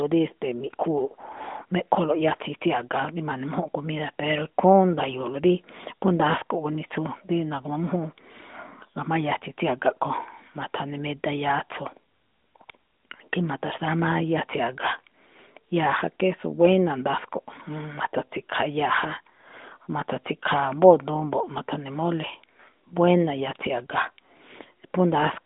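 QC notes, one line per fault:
No faults found.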